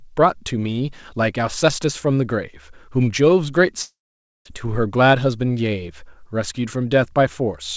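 From 3.82 to 4.47 s the speech breaks off for about 0.65 s, most likely a long network dropout. The receiver stretches the last sound into a brief fading buzz, then leaves about 0.5 s of near-silence before speech resumes with that stretch missing. On the waveform this shows as a decaying tail into a flat gap. On the spectrogram, a smeared, fading band gives way to an empty column. Throughout, the spectrogram is also empty above 8 kHz, which fits a wideband call codec.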